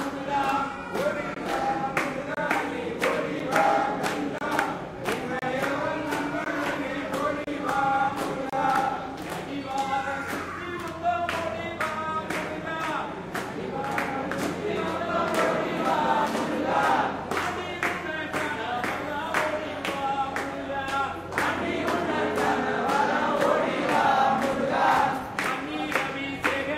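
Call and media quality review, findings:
Gap between stream segments: hard-edged silent dropouts of 8 to 32 ms at 1.34–1.36, 2.35–2.37, 3.39, 4.38–4.41, 5.39–5.42, 6.44, 7.44–7.47 and 8.50–8.53 s. Roughly 1 s spacing matches 1 s segment boundaries. Probable component: packager or player timeline. Segment timestamps leave small holes and the player pads them with silence. No content lost, but playback is stretched by up to 31 ms per boundary.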